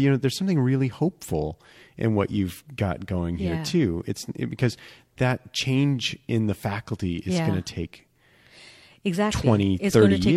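Nothing stood out on listening to this speech recording.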